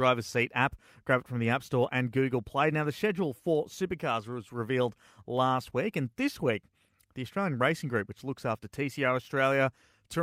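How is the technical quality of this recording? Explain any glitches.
The recording has one technical problem: clock slip clicks. From 0.47 s to 9.50 s there are faint ticks at a steady pace, roughly one per second, about ten in all. They are clearest on loud, sustained parts of the speech and vanish in pauses. The likely cause is two devices running on separate, unsynchronised clocks, mismatched by about 30 parts per million. Each tick fits a single sample being dropped or repeated as the error builds up.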